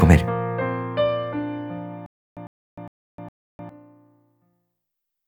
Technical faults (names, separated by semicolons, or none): stutter with silent gaps